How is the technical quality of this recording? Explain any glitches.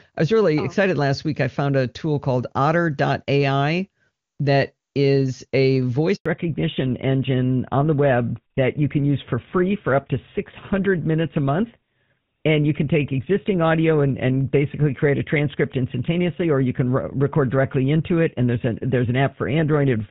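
The recording has two connected faults around 6.2 s: a brief dropout, after which the call stays at reduced bandwidth until the end. Before that point the wideband HD Voice codec sounds clear, consistent with one of its higher rates.

Handover gap, 6.16 to 6.26 s, just after "that is a": while the call switched from one network to another, no speech frames reached the receiver, so the sound fades within a few tens of milliseconds and stays silent for 100 ms. On a waveform this is a flat strip of near-zero amplitude. On a spectrogram it is a narrow vertical blank band across all frequencies. Whatever was said during that tenth of a second is lost.

Fallback to narrowband, 6.26 s to the end: after the handover the link continued on an older narrowband codec, most likely GSM full rate. Everything above 4 kHz is gone from then on. Sibilants lose their crispness, and the sound becomes duller and rougher. 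On a spectrogram the energy that reached up toward 7 kHz before the gap is abruptly capped by a hard horizontal ceiling at 4 kHz, with empty space above it for the rest of the clip.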